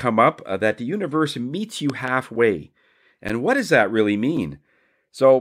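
A loud pop hits this speech clip between 1.90 and 2.10 s, just after "the universe meets you": two sharp thumps, roughly 10 dB above the voice, which carries on beneath them. The likely cause is a voltage pulse from a plug, switch or static discharge entering the signal path. Blocks of digital silence follow at 2.36 s (again after "the universe meets you"), 3.29 s and 4.37 s (after "what does that really"). Each is a 5.3, 10.7 and 5.3 ms gap cut hard to silence, heard as a tick or dip, which fits 256- and 512-sample output buffers not being filled in time.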